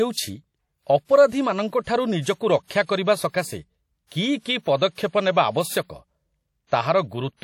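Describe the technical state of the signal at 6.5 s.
At 6.5 s the speech carries plainly audible codec damage that runs through the whole clip, likely WMA compression at a low setting, which fits a bitrate around 48 kbps. Long transform blocks smear quantisation noise over tens of milliseconds, so the sound rings and turns washy, with hiss that swells and fades with the speech. Nothing is present above 17.9 kHz. The smearing and the hiss that follows the level, rather than steady broadband noise, set it apart from plain added noise.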